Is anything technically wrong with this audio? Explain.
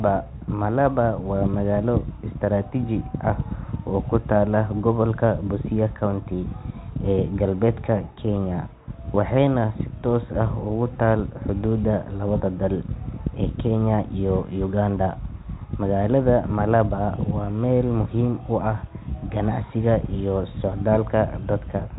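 No, nothing is technically wrong with this audio.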